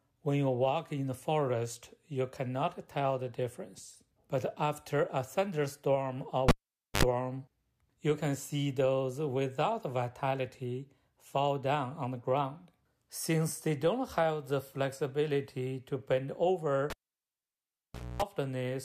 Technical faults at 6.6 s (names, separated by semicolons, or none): cable pulled and plugged in